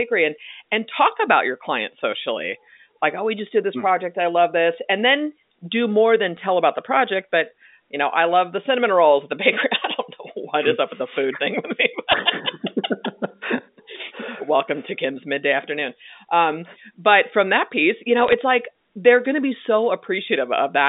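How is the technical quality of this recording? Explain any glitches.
The recording has three short bursts of bit errors on a digital phone line, heard through narrow telephone-band audio running from 200 Hz to 3.7 kHz. They fall at 6.37 to 6.41 s, between "then do more than" and "about the project but"; at 12.12 to 12.18 s; and at 18.24 to 18.34 s, between "from that piece you" and "like they're going to". In each burst, roughly one and a half to two bits in every thousand were flipped on the 8-bit G.711 line, and each flip corrupts a single sample. Flips that land on an upper bit, or on the sign bit of a loud sample, throw that sample far from its true value, producing a sharp tick, and clusters of them sound like brief crackle. What separates this from packet loss or a dropout is that the speech never goes missing. The words run on uninterrupted beneath the clicks rather than being muted, repeated or smeared.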